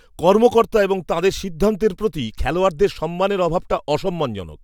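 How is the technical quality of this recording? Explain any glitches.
No glitches or technical faults can be heard anywhere in the recording.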